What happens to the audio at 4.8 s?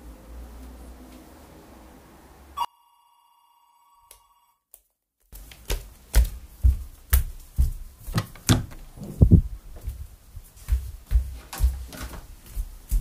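At 4.8 s the sound falls by about 34 dB into a faint residue, from 2.65 s to 5.33 s. The likely cause is one channel inverted: with one stereo channel's polarity reversed, the shared content cancels on mono summing and only the inter-channel difference remains.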